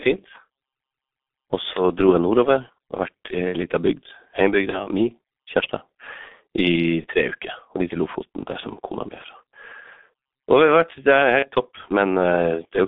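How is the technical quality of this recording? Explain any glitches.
The speech throughout is muffled and hoarse, with smeared consonants, and there are five brief glitches where it turns buzzy or hollow and then weak.

The dull, rough character across the whole clip comes from the G.723.1 codec. The audio is confined to roughly 200 Hz to 3.6 kHz, so both low body and upper brightness are missing. The heavy coding damage, consistent with its 6.3 kbit/s mode, comes from the codec modelling the voice in coarse 30 ms frames. It tracks rapid changes poorly, leaving consonants blurred and the tone gravelly.

VoIP packet loss concealed by the speech codec causes the glitches at 1.73 to 1.82 s, 4.70 to 4.87 s, 7.01 to 7.06 s, 8.60 to 8.67 s and 11.39 to 11.49 s. At each one the sound briefly smears into a buzzy tone or coloured noise that fades, rather than dropping out. Each gap fits a single missing 30 ms frame, which the decoder filled by repeating its last pitch and filter at falling gain. 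Because each frame builds on the previous one, the voice stays thin or distorted for a short while after the real audio resumes, stretching each glitch beyond 30 ms.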